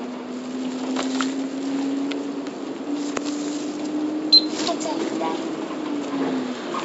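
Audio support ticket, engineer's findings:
No fault found: the sound passes through the WebRTC call path with G.722 coding, and the band stops at 8 kHz as that codec's design dictates.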